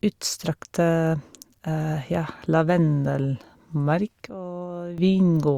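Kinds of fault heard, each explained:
Sudden gain jump: a digital gain setting was likely switched instantly instead of being ramped, so the level changes between one sample and the next. At 4.30 s the speech and the background noise drop together by about 12 dB, staying low until 4.98 s, then snapping back up. Both edges are abrupt steps rather than fades, so the quieter stretch sounds cut in and out rather than turned down.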